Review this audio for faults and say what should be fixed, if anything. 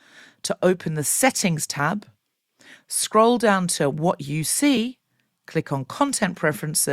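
Audio missing between chunks, at 1.79 s and 4.77 s: the speech skips forward abruptly at each point, with a small slice of sound, around 20 ms, dropped and the two sides butted together with no gap of silence. The skips fall roughly 3 s apart, which fits a recorder or processor likely working in 3-second chunks and losing a moment each time it closes one block and opens the next. To prevent it, keep the capture buffer open across block boundaries, or overlap consecutive chunks so no samples are discarded during the handover.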